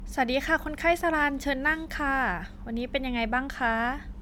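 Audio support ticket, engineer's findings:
Generation loss across the whole speech clip. Swirly, hollow texture with smeared consonant attacks, likely from repeated MP3 decode/re-encode, roughly five passes, consistent with a 128 kbit/s chain. Each pass requantises on a shifted frame grid, so noise and spectral holes pile up. Differs from a single low-bitrate encode: bandwidth still extends to about 20.1 kHz, so the damage exceeds what that bitrate alone explains.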